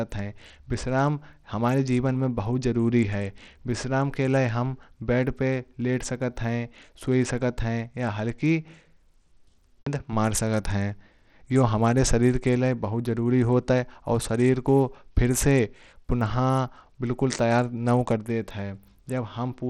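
From start to finish the speech carries plainly audible damage consistent with Bluetooth SBC compression, most likely from a starved bit pool that fits a rate near 80 kbps. The upper sub-bands get too few bits, so the treble thins and flickers in and out while a gritty, grainy noise and aliasing cling to the sound. Plain band-limiting would give a clean, steady cutoff instead.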